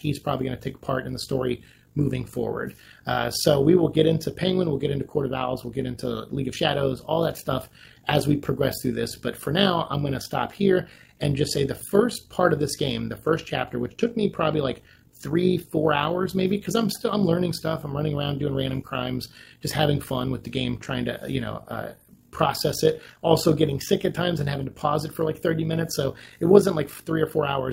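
From start to finish the audio carries overlap-add ripple: the windowed frames were recombined with an overlap whose gains do not sum evenly, so the level dips and swells by about 11 dB once per frame, around 50 times a second, giving a coarse, robotic flutter.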